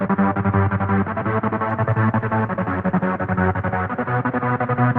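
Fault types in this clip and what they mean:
call bitrate drop: From 1.71 s the Opus encoder gets far fewer bits, which fits a fall from 40 to 14 kbps, lowest for 1.09 s. Coding turns coarser, the upper limit narrows from 12 kHz to 8 kHz, and the sound stays degraded to the end.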